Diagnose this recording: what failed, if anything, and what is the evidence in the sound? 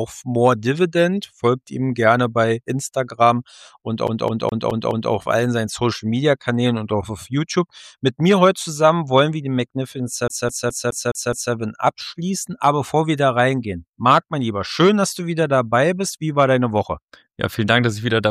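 From 4.07 to 5.12 s, a fragment of about 0.21 s repeats five times, and from 10.28 to 11.54 s the same 0.21 s loop returns for six repeats. Each repeat is cut by a short mute, which gives the fast, even stutter of a CD stuck on one turn. This is a playback-stage fault: a scratch at one spot on the disc throws the laser back a track on every rotation, so the player keeps replaying the same short slice until it gets past.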